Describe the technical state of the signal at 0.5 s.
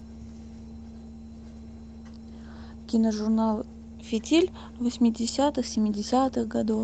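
At 0.5 s the speech is intact, with no dropout, click or distortion, just the band-limited sound of a call codec path whose top end stops at around 8 kHz.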